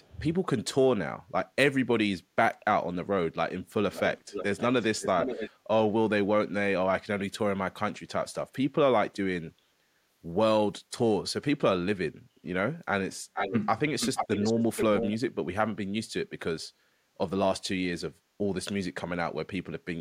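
Speech, with an echo leak in five places: 0.0 to 0.2 s, 3.93 to 4.63 s, 5.0 to 5.51 s, 13.34 to 13.6 s and 14.0 to 15.17 s. A delayed copy of the voice trails it by roughly half a second (447, 524 and 478 ms), very faint at the start but only about 5 to 10 dB below the speech later. The likely cause is a far-end speakerphone whose echo canceller let its loudspeaker output return. On a spectrogram the harmonic striations appear doubled, shifted right by that delay.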